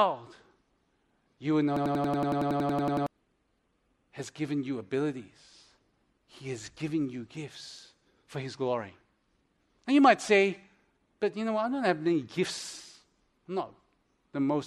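A system hang loop runs from 1.77 to 3.07 s, just after "you will know". The playback side stalled while the audio hardware kept replaying its ring buffer, so one 93 ms slice of speech repeats exactly, 14 times, at about 10.8 Hz. That loop length fits a 4096-sample buffer. It comes across as a rapid machine-gun stutter, and about a second and a half of the real speech never arrives.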